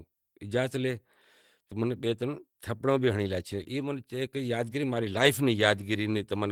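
Just after "ترن تھپڑیں بھی ہنڑی", from 3.51 to 3.61 s, there is a lost packet rebuilt from error correction. The decoder played a low-bitrate copy carried in the next packet. So there is no gap. About 60 ms sounds rougher and noisier, which fits several separate lost packets.

From 3.63 to 3.67 s comes a short concealed packet loss. About 20 ms never arrived in time. The receiver extended the preceding sound to cover roughly 15 ms, then blended back. It is heard as a brief smear or wobble.

From 5.03 to 5.29 s, a longer lost packet is rebuilt from error correction. About 140 ms is replayed from the low-bitrate copies. That stretch turns grainy and noisy without dropping out.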